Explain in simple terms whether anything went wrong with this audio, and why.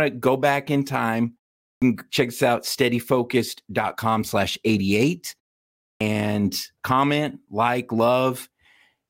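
Something did go wrong: a clipped start after a pause, twice. At 1.71 s, between "go back in time" and "check us out", about 0.11 s is swallowed, and again at 5.89 s. The playback device dozed during the silence and woke late. Unlike muted pauses, which only hush the gaps, this cuts off real sound.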